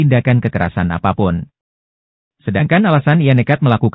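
No technical fault can be heard anywhere in this audio. There is nothing to time or trace to a cause.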